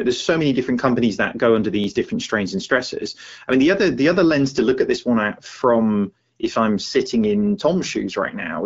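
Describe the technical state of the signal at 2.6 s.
At 2.6 s the signal is intact, with no dropout, click, distortion or other fault, and the speech carries only the light character of AMR wideband (HD Voice) coding at 12.65 kbit/s.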